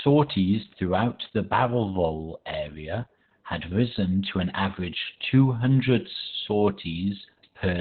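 From start to end the speech carries Opus voice compression at heavy damage: a hard ceiling near 4.3 kHz, the narrowband limit a low-rate linear-prediction coder falls back to, leaves it muffled, hoarse and slightly robotic. A spectrogram shows an empty band above that line throughout, consistent with roughly 8 kbps.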